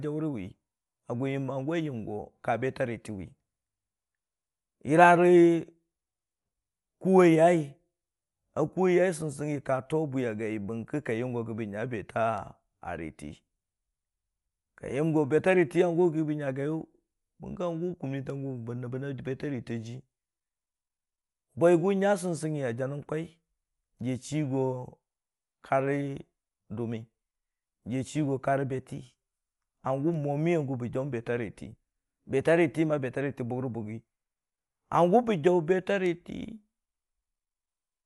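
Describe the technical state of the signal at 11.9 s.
At 11.9 s the speech is dull, with nothing above 11.5 kHz and a rough, fluttering noise around voiced tones, present for the whole clip. This is likely Dolby Digital compression at a low bitrate, consistent with about 64 kbps, where the encoder narrows the band and dither noise fills the lines it left empty.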